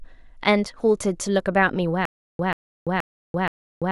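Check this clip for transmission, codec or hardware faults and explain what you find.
There's one fault here: from 2.05 s to the end, stutter with silent gaps. A 136 ms burst repeats four times, each followed by about 338 ms of digital silence, likely from a stalling stream replaying its last fragment.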